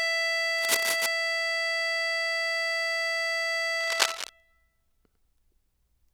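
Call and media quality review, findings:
Cable scratch noise, 0.58–1.08 s and 3.81–4.29 s: dense, uneven rustling bursts over the music, about 5 dB below it at first, then roughly as loud. Likely a worn cable or connector shifting, its contact resistance fluctuating rapidly.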